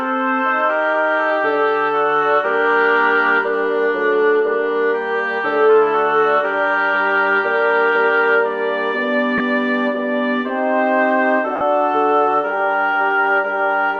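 At 9.38 to 9.40 s and again at 11.56 to 11.61 s, lost LE Audio frames leave brief noisy smears where the decoder reused the previous spectrum with scrambled signs. This gives a hiss-like blur rather than the clean silence of a plain dropout. The gaps last 20 ms and 50 ms, fitting two and five 10 ms frames.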